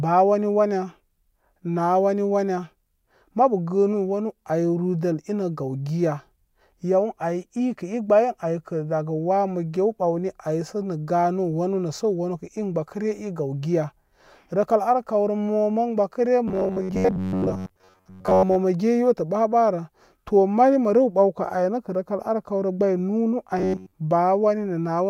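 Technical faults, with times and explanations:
16.48–18.57 s and 23.59–23.92 s: robotic sound from repeated short buffers. Speech turns into a rigid metallic buzz at 93.8 Hz, likely because new audio arrived too seldom and a roughly 10.7 ms fragment was looped in its place, covering most of the first stretch and all of the second.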